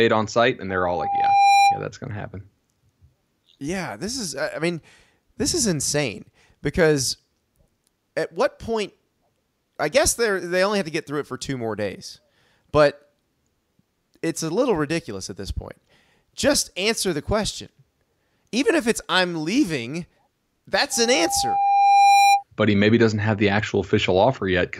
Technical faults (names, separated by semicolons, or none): loudspeaker feedback squeal